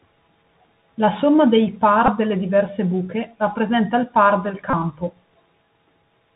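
Bluetooth CVSD headset codec damage runs through this speech clip: everything above 4 kHz is missing, s sounds come out scratchy, and a granular hiss sits under the speech, which fits the one-bit 64 kbps headset link. A Bluetooth headset packet repeated at 2.06 to 2.11 s, between "somma dei" and "delle diverse buche rappresenta", and again at 4.70 to 4.73 s, after "rappresenta il par del". In each case lost packets were replaced by the previous packet's bits. The 3.75 ms repeats produce a brief buzz near 267 Hz, pointing to about four and eight lost packets respectively.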